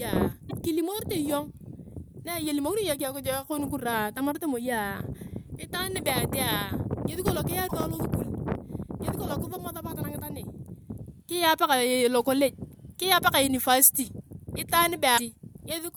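A broken MP3 bit reservoir is the likely cause of three brief glitches in the speech, at 0.49 to 0.53 s, 7.67 to 7.72 s and 15.17 to 15.20 s. Each lasts only a few tens of milliseconds, about one to two frames of roughly 26 ms. After frames are cut out, the next frame reaches back for borrowed data and decodes bytes belonging to another frame, so the sound skips forward with a short garbled break at each splice.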